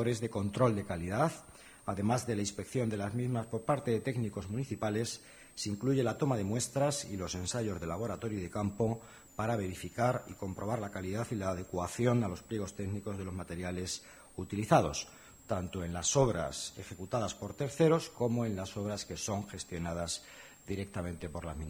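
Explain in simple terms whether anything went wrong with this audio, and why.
A thin, high whistle runs under the sound from start to finish, wandering between about 7 and 9.3 kHz: switching supply whistle, from a power supply buzzing audibly.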